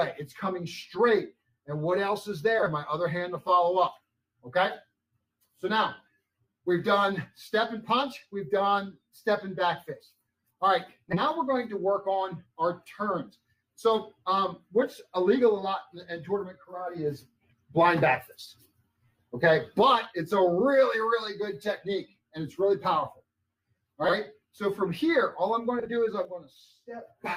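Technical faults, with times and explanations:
2.58–2.68 s, 11.09–11.21 s, 24.04–24.14 s and 25.79–25.88 s: frames out of order. Two neighbouring blocks of roughly 40 ms (30 ms in the last) play swapped. This gives a brief garbled flutter.
26.25 s to the end: sudden gain jump. Sound and background noise drop together by about 8 dB in one step. A digital gain change applied without a ramp is the likely cause.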